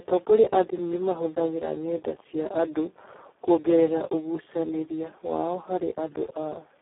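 Throughout the clip, the Speex codec runs at a very low quality setting, consistent with a bitrate near 4 kbps, which starves the excitation of bits. The speech comes out hoarse, buzzy and robotic, confined to a 300 Hz to 3.5 kHz band with nothing above 3.9 kHz.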